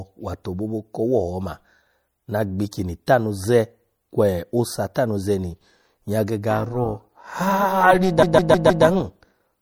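It's a speech clip, and the whole thing has a watery, swirly quality with dulled top end and smeared consonants, which points to MP3 compression, likely at a low bitrate around 64 kbps, where the encoder cuts the treble and lets weak frequency detail flicker in and out between frames. From 6.50 s to the end at 9.62 s there's overlap-add ripple: the level pumps by about 11 dB at around 400 Hz, so it comes across as a metallic, robotic buzz, because the frames were stitched back together with overlaps that don't sum to a steady gain. On top of that, from 8.22 s to 8.85 s you get repeated frames. A chunk of about 157 ms plays four extra times, so it stutters and stretches the audio by roughly 0.63 s.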